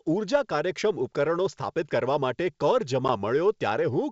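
A speech clip carried over G.722 wideband telephone coding, which sounds like its full 64 kbit/s mode, with speech reaching up to 7 kHz. It has one instance of packet loss on an ADPCM call, at 3.08 to 3.10 s. About a single packet, roughly 10 ms of audio, drops out and is filled with silence. The gap is a hard-edged hole: the waveform falls abruptly to a flat line, and the spectrogram shows a narrow vertical blank across every frequency. Because the receiving decoder's adaptive predictor and step size drift out of step with the sender's during the gap, the speech re-enters with brief distortion or a wrong level. This is visible as a sharp edge or an uneven envelope just after the hole, and it settles within some tens of milliseconds.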